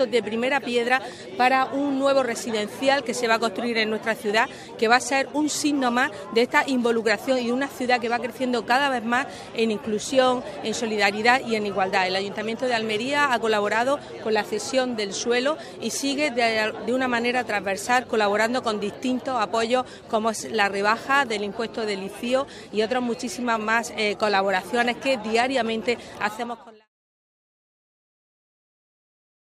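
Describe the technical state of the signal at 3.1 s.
At 3.1 s the signal is intact, with no audible technical fault at that moment.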